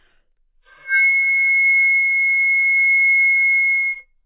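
No technical faults are audible anywhere in the recording.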